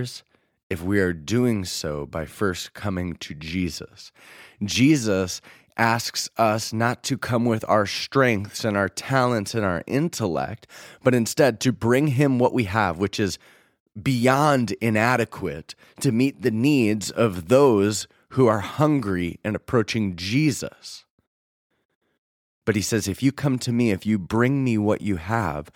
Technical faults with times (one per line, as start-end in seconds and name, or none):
none